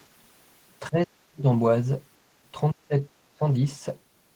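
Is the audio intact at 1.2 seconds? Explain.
No. At 1.2 s the speech sits inside a dip from 0.9 to 1.46 s, falling by about 40 dB. This is speech suppressed in double talk, likely from an echo canceller that could not tell its own talker from the loudspeaker echo and turned both down.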